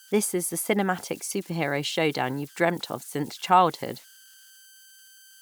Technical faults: converter idle tones

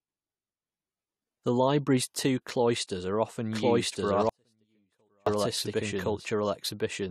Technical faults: pre-echo; doubled audio track; audio dropout to a faint residue

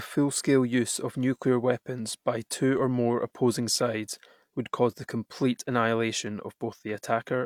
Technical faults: none

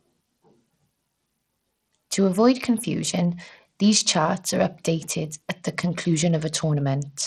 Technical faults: Bluetooth SBC compression

